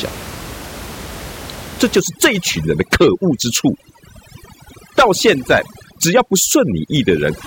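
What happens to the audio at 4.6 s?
At 4.6 s you're in a stretch of overdone noise removal running from about 2.00 s to the end: bands near the noise floor get gated out, so the room noise, about 15 dB under the speech, drops to twinkly near-silence and quiet parts of the voice go with it.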